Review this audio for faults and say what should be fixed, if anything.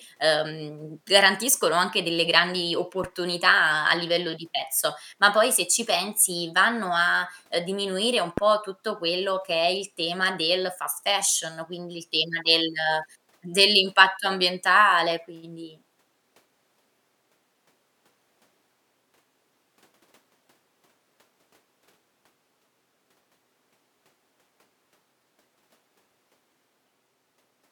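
A phantom power thump occurs twice in this speech: 3.04 to 3.14 s, after "garantiscono anche delle grandi", and 8.38 to 8.47 s, between "a ehm diminuire un" and "tutto quello che è". A supply switching on or off on the live input sends a voltage step through the coupling capacitors, producing a deep thump that dies away within about 21 to 23 ms. A plosive or handling bump would carry breath noise or rustle, but this is a single clean low-frequency step.

Mute the channel before switching phantom power, and unmute it only after the supply has settled.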